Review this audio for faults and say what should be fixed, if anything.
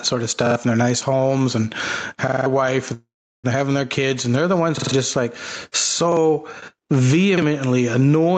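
Gain pumping runs through the whole clip. Loud and soft parts sit closer in level and the sound is squashed, with a gain swing of about 15 dB. The likely cause is input gain set far too high, with a fast limiter clamping each peak. Lowering the microphone gain and easing the limiter would stop it.

Repeated buffers cause stutters at 0.46 s, 2.28–2.46 s just after "their nice homes and", 4.78–4.92 s between "and they're the ones" and "just like", and 7.38 s. A 46 ms piece replays one to four times, with hard joins. That length fits a 2048-sample buffer. Fresh audio arrived late, so the device reused the last block. A larger output buffer or steadier audio scheduling would prevent this.

A call audio freeze runs from 2.93 to 3.46 s, just before "having their kids and". The last sound hangs on and fades, then goes silent for about 0.36 s. Speech resumes where it stopped, so nothing is lost, but everything after lands about 0.5 s late. 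Held-up packets likely emptied the jitter buffer. A steadier network or a deeper jitter buffer would prevent it.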